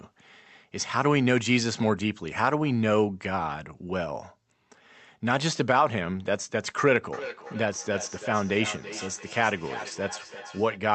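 From 7.13 to 10.87 s there is feedback echo between two devices. A second device replays the sound, returning about every third of a second, about 13 dB down.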